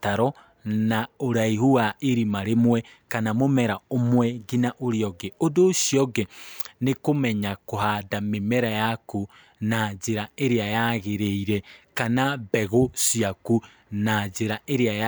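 No technical faults can be heard anywhere in the recording; the speech signal runs continuously without any audible disruption to its level, timing or frequency content.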